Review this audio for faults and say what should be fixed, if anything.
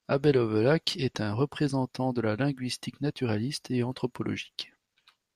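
Nothing in the signal needs fixing, as the recording stays continuous and stable with no audible technical faults anywhere in it.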